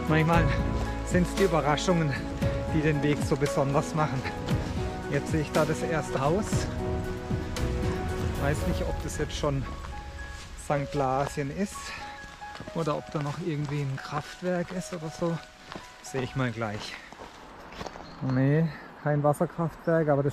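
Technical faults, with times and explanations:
6.16 s, 12.17 s and 17.58–17.60 s: damaged data in a compressed stream. Each is a brief chirp or blip of 20 ms or less, where corrupted bytes made the decoder misread frames, lose sync, and search for the next valid frame header before resuming.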